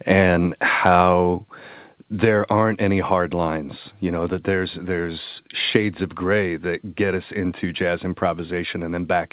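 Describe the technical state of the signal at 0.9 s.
Microphone overload spans 0.86 to 1.02 s. The input was likely about 5 dB too hot, so peak tops get flattened into a harsh crackle.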